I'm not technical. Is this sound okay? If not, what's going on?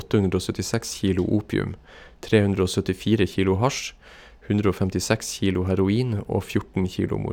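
Yes, this speech recording is fine. There's nothing wrong with it at any point.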